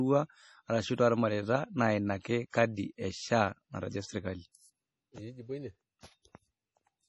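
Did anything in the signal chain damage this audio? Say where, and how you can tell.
Yes. MP3 compression is heard throughout: the speech is band-limited with nothing above 11.5 kHz, and it carries a heavy watery swirl as weak frequency lines drop in and out between frames. The codec stage is likely at fault, starved of bits at a rate that fits about 32 kbps.

Pre-echo appears at 2.22 to 2.25 s, 2.50 to 2.53 s and 6.00 to 6.03 s, as roughly 30 ms of hiss ahead of each sharp onset. Quantisation noise spread across the transform block leaks into the quiet moment before the attack and softens it.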